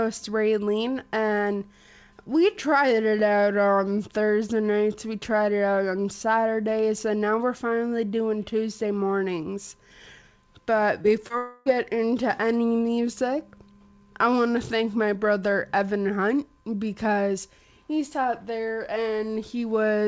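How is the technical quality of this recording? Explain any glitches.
The recording has three network glitches clustered between 11.02 and 11.68 s. The call path band-limits the audio, with nothing above 8 kHz, which fits a wideband codec such as G.722 at 64 kbps.

Short concealed packet loss occurs twice, at 11.02 to 11.06 s and again at 11.28 to 11.32 s. Each time about 20 ms of audio arrived too late for the decoder. The receiver bridged the gap by extending the preceding sound, pitched or noise-like according to what came before, then crossfaded back into the real signal. The result is a quick smear or wobble, and any very brief sound in those windows may be missing.

A long network dropout follows from 11.38 to 11.68 s. The sound there stops progressing and is replaced by roughly 0.28 s of continued, fading buzz or hiss, with no fall to full silence before real audio resumes. The likely cause is that about 280 ms of packets never arrived, so the concealment stretched the last good audio across the whole gap. 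When the signal returns, the material from that stretch is absent rather than delayed.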